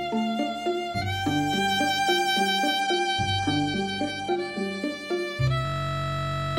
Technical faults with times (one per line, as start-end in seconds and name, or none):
2.81-4.81 adaptive stream at a lower bitrate
5.65-6.57 system hang loop